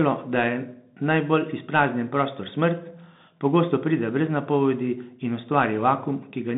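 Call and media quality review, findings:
Bluetooth CVSD headset codec, throughout the speech. Band held to about 150 Hz to 3.7 kHz, nothing above 3.8 kHz; plainly audible codec damage. Probable component: headset link on the CVSD voice path, which fits a 64 kbps one-bit up/down stream with adaptive step size.

Telltale versus plain narrowband filtering: granular hiss under the speech, scratchy s sounds, and loud high-frequency passages distorting where the step size can't keep up (slope overload), not just a dull band-limited sound.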